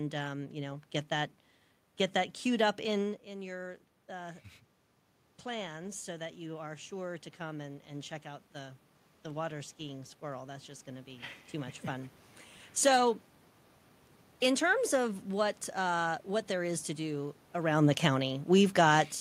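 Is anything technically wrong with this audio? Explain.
Yes. Automatic gain rising runs from 5.58 to 11.85 s. The input had fallen by about 11 dB. The gain control answered by raising its gain gradually, by about 9 dB. Voice and room noise swell together. About 2 dB of the lost level stays missing.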